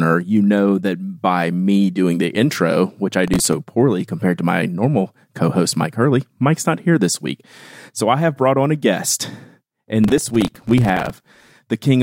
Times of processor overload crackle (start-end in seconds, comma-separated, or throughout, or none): 3.24-3.53, 10.04-11.51